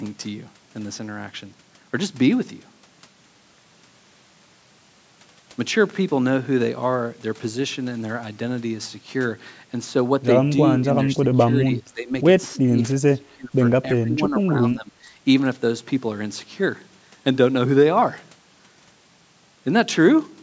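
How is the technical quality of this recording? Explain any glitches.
The speech has one recurring glitch, between 11.04 and 15.07 s; the call's microphone processing caps content at 8 kHz.

Speech suppressed in double talk, at 11.04–12.12, 12.58–12.79, 12.99–13.54 and 13.90–15.07 s: the talker dips by about 15 to 30 dB, likely because an echo canceller mistook overlapping speech for echo. The waveform shows sudden notches, and the spectrogram shows faded or gapped bands.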